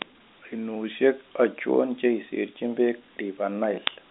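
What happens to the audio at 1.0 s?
Nothing goes wrong at 1.0 s: the speech carries on intact through that moment, heard through an ordinary telephone-band G.711 line with nothing above about 3.8 kHz.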